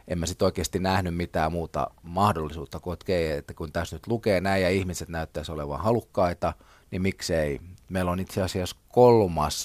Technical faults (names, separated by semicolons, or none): none